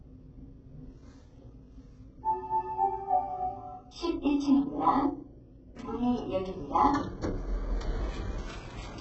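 A short recording of sounds with HE-AAC compression damage heavy all the way through: nothing above 8 kHz, and the top end comes across gritty and metallic, likely from treble rebuilt out of copied lower bands, which fits a very starved bitrate around 8 kbps.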